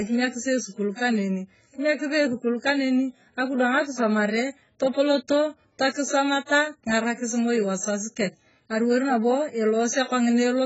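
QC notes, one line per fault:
Throughout: AAC compression, likely the cause of the dull, smeared sound. Nothing is present above 7.6 kHz, so sibilants lose their edge, and the speech carries the warbly, fizzy texture of a transform codec starving its frequency lines of bits, which fits a very low bitrate near 12 kbps. A plain low-pass filter would dull the top but leave a clean texture; here the damage sits inside the band as well, with holes and shimmer on sustained sounds.
6.46–6.49 s: pre-echo. A short hiss rises about 35 ms before a sharp onset, and the attack itself sounds softened. The codec spread the noise budget sized for the loud transient across its whole block, so the quiet moment ahead of the attack is filled too. Unlike a click or a dropout, it comes before the event and takes the shape of a smeared onset.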